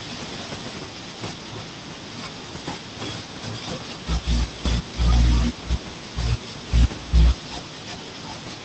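No technical faults occur at any point in the recording, so there is nothing to place in time order.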